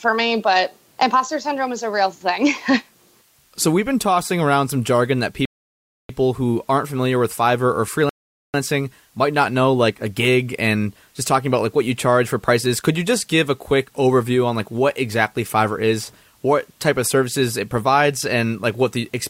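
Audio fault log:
throughout, low bit depth with dither: a constant, even hiss sits roughly 35 dB below the speech, because the audio is reduced to about 9 bits with dither turning rounding error into white noise.
5.45–6.09 s and 8.09–8.54 s, rebuffering stall: the speech drops to silence after "around some jargon that" and resumes exactly at "who aren't familiar with", adding 0.64 s, then again for 0.45 s, as playback ran dry awaiting data.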